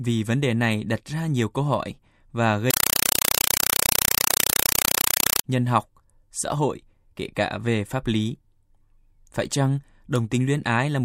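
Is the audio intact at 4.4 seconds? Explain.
No. From 2.71 to 5.44 s, just after "nhiều câu hỏi và", a compressed stream is played as audio. Undecoded data, which fits a 192 kbps AC-3 stream, gives loud chattering static: 4 ms noise bursts 31.25 times a second, shown as dense blocks separated by flat silence and as broadband vertical stripes.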